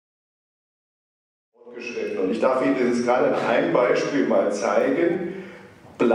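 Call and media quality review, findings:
No faults found.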